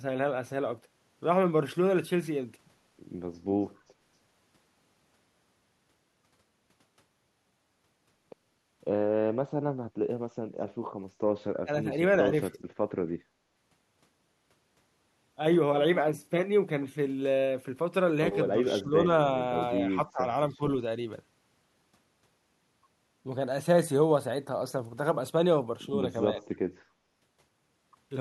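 At 3.89 to 4.00 s, background gated by the echo canceller: the room tone dips by about 10 dB, visible as a brief notch in the noise floor.

At 11.63, 12.54, 18.53, 19.90, 20.52 and 26.33 s, speech suppressed in double talk, likely from the echo canceller attenuating during overlap: short gaps or dips of up to around 25 dB appear as faded waveform chunks and thinned spectrogram columns.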